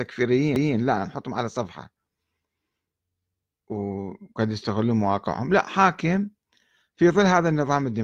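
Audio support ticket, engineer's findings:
CD skip at 0.56 s. Tick and a brief mute of a few milliseconds, then speech resumes from a different point. Probable component: disc transport. A knock or disc flaw made the laser jump to another track of the spiral.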